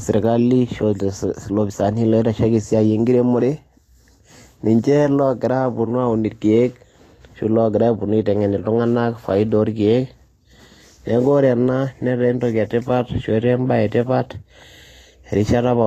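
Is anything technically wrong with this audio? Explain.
Yes. Throughout the speech, the treble is hissy and grainy and attacks sound smeared, likely from Vorbis compression at a low rate, perhaps around 34 kbps. Coarsely quantised treble turns fine detail into noise, and nothing remains above 14.2 kHz. A plain low-pass filter would simply sound duller, without this grain.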